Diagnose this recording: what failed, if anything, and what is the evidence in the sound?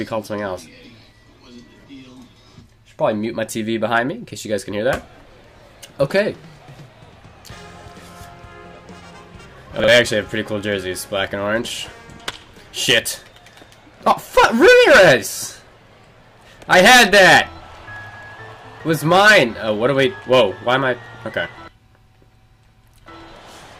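Chunks out of order at the driver or buffer stage, 9.8 to 9.88 s: a 40 ms chunk plays one slot late, causing a jumbled moment. Three hard joins appear as waveform steps and vertical spectrogram lines.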